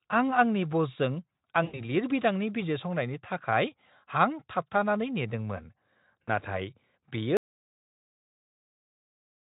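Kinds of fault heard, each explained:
VoIP packet loss concealed by the speech codec: at 1.63 to 1.81 s and 6.24 to 6.30 s, about 100 ms and 40 ms of packets went missing. The decoder extended its last pitch and spectral shape at falling gain, so the speech smears into a fading buzz or coloured noise before recovering.
Audio dropout to silence: from 7.37 s to the end, the sound cuts off into silence with no room tone, as silence was written in place of signal, most likely because the input was disconnected or muted. Nothing from that stretch survives.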